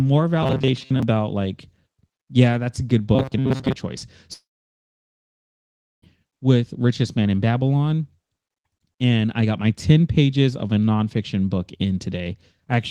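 From 0.43 to 1.03 s, and again from 3.15 to 3.75 s just after "yeah that's a good", the speech turns into a rigid metallic buzz pitched at 133 Hz. This is robotic sound from repeated short buffers, likely from a roughly 7.5 ms chunk being replayed while most of the real audio was skipped.

From 4.33 to 6.04 s comes a long network dropout. The last sound drags on as a fading buzz, then about 1.6 s of silence follows, and 1.7 s of audio is gone when speech resumes, likely because packets stopped arriving.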